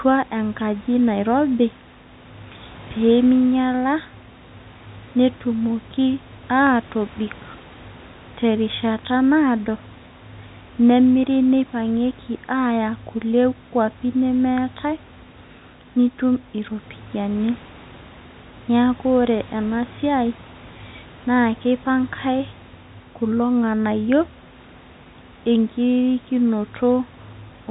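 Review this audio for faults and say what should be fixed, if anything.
Nothing here needs fixing, since the speech comes through without any technical faults.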